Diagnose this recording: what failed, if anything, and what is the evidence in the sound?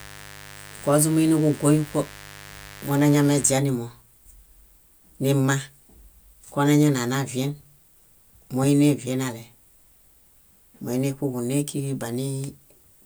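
The fault is mains buzz, picked up in the analogue wiring. A steady, raspy buzz runs under the speech from 0.0 s to 3.56 s, then stops. It sits roughly 20 dB below the speech. Its fundamental is 50 Hz, with a dense stack of harmonics reaching several kHz. That gives it the edge of a buzz rather than a smooth hum. Sharp switching spikes from a dimmer, a rectifier or a missing shield are entering the signal path twice per mains cycle, 100 times a second.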